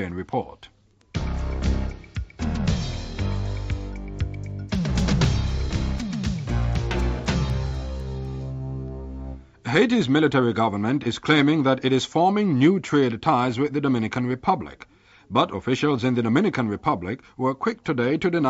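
From 4.5 s to 8.25 s a resampler restarted on every block produces regular ticks at 4 Hz, present only while there is signal. Each 250 ms block was converted from 16 kHz to 48 kHz on its own, so every block edge carries a small discontinuity.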